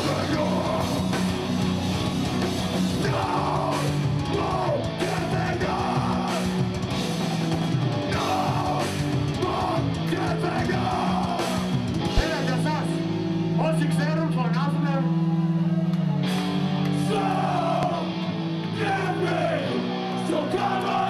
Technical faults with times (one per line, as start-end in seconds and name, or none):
12.17-12.21 loud pop
17.83-17.87 loud pop